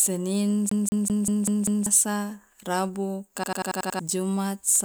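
It's a short speech recording with two separate looping faults. From 0.69 to 1.86 s there's a CD stuck on one turn: the same 195 ms slice plays six times running, with a tiny mute at each jump. That's the classic skipping-disc stutter, where a scratch kicks the laser back one track at the same point on every rotation, so you get that quick, even repeat until it finally breaks free. Later, from 3.44 to 3.99 s, there's a system hang loop: a 92.9 ms chunk repeats six times at about 10.8 per second, which gives a machine-gun stutter rather than a buzz. That loop length fits a 4096-sample buffer. What's happening is the machine or driver stalled while the audio hardware kept replaying its ring buffer, so around half a second of the real audio never made it out.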